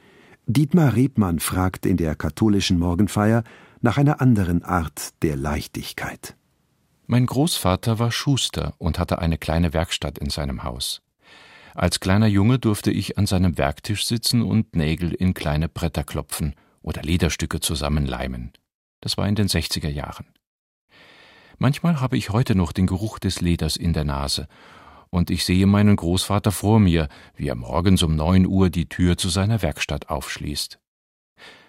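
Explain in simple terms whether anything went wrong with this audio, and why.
Nothing went wrong with this speech recording: the signal stays steady and intact the whole way, with no technical faults to be heard at any point.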